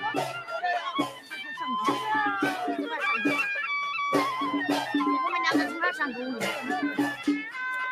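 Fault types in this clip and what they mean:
Noise suppressor applied to music or sounds: A speech-oriented noise suppressor stays active across the whole clip. It treats steady tones and decaying tails as noise. Levels swing by roughly 5 dB, so sustained parts pump and thin while sharp onsets pass through.
Sound cut by the noise suppressor: From 1.07 to 1.33 s the suppressor misreads this sound as noise. It pulls it down by up to about 9 dB. The sound sinks in level, leaving a brief dip.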